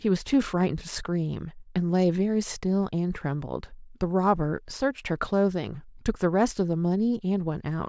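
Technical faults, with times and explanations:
Nothing technical goes wrong anywhere in this speech recording; there's no fault to point to.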